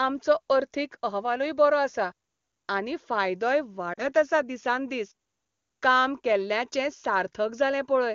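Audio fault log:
3.93 to 4.05 s, lost AMR speech frames: A short gap of about 40 ms breaks into the speech, which fits two lost 20 ms frames. With no valid data, the decoder repeats the last good pitch and vocal tract settings and lowers the gain. The sound stretches briefly, then sinks toward silence. Because this is the wideband decoder, the fade comes quickly. Speech then returns, weak or rough for a moment before it steadies.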